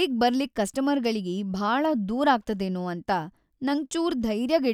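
No technical faults are audible.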